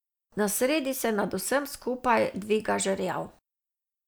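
No audible faults anywhere in the speech recording; nothing to flag.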